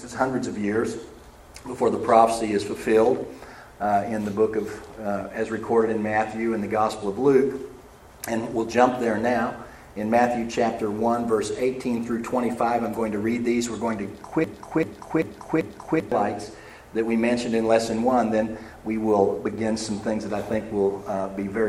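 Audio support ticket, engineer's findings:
Broken-record loop, 14.44–16.12 s: a 389 ms fragment repeats back to back four times, and the underlying audio is lost. Likely a stalled player or stream re-sending its last buffer.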